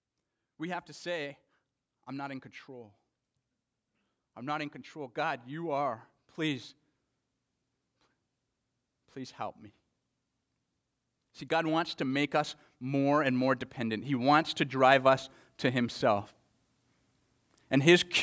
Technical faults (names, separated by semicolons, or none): automatic gain rising